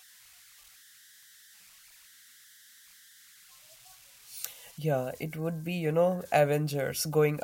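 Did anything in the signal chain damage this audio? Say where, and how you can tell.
Yes, at the converter: converter idle tones run throughout, a faint whistle around 2 kHz in pauses, about 28 dB down, from an undithered delta-sigma stuck cycling.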